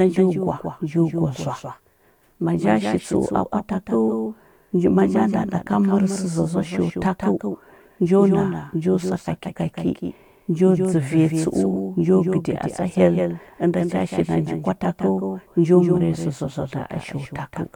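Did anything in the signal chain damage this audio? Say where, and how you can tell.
Yes. There's a doubled audio track running the whole way through this speech. Every syllable comes back a fifth of a second or so later, a few dB quieter than the original, as a clean full-band copy with no decay or room colour to it. That's not an echo; it's the same signal mixed in twice. The likely culprit is a second, slower capture path, or an edit or mix stage holding two copies out of step.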